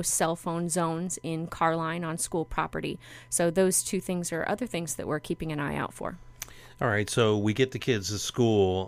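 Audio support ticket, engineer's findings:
No audible fault found in the speech clip. Nothing to attribute to any component in the chain; no action needed.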